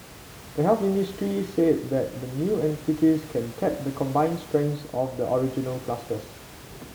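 No technical faults occur in this speech clip; the only background is the room noise, about 19 dB below the speech.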